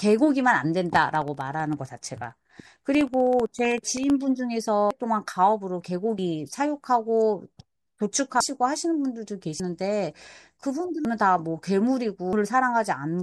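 Periodic USB or driver dropouts run from 0.90 to 4.10 s: every 64 ms, about half a millisecond of speech falls to silence, giving around fifty regular ticks.

Compressed frames skipped at 4.91, 6.19, 8.40, 9.60, 11.05 and 12.33 s: the speech jumps ahead by roughly 100 to 500 ms, in steps fitting an 85 ms frame.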